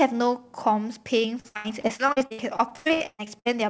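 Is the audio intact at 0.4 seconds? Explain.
Yes, the speech at 0.4 seconds is intact, with no fault at that moment beyond the normal character of the G.722 call path, whose band stops at 8 kHz.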